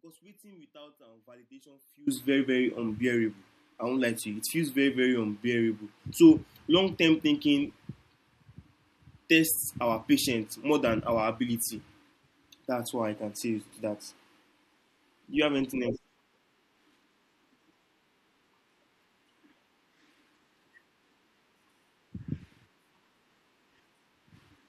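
From the very start until 2.07 s the clip is in an audio dropout to a faint residue. The speech is already missing when it begins, leaving only a faint leak of sound roughly 25 dB below normal level, and full level snaps back abruptly just before "very very unbearable I". The likely cause is a loss of the wanted signal while the path stayed live. Unlike a true mute, the gap is not silent, and unlike a fade, there is no gradual rise.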